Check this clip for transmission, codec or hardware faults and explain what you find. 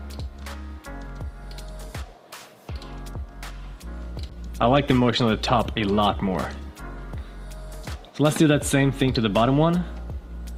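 There's one fault: a call bitrate drop from 4.31 to 7.19 s. The connection's bandwidth estimate fell, so the encoder was told to work with far fewer bits and coded everything much more coarsely. It stays at its lowest for about 2.8 s, after a fall from around 48 kbps to 16 kbps. You'll hear the sound turn rough and degraded through that stretch, then clean up once the bitrate climbs back.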